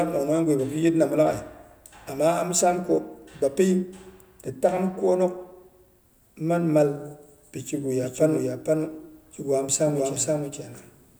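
From 8.01 s onward, a doubled audio track: an equally loud copy lags about half a second, likely via a slower second path, leaving offset duplicate spectrogram patterns.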